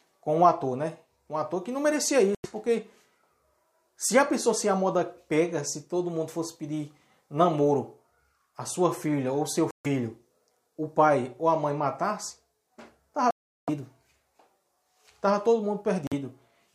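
At 2.35 s, 9.71 s, 13.31 s and 16.07 s the sound cuts to silence for about 93, 139, 372 and 46 ms, then returns as though it had kept playing. This is most likely a Bluetooth dropout, where packets reach the headphones too late and are discarded. On a waveform each gap is a flat line with abrupt or briefly faded edges. On a spectrogram it is a clean vertical band empty across all frequencies.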